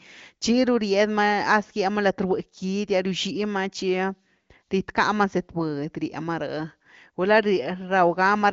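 Nothing stood out on listening to this speech recording, which carries the sound of an AMR wideband (HD Voice) call at a high rate, with the top end stopping around 7.5 kHz.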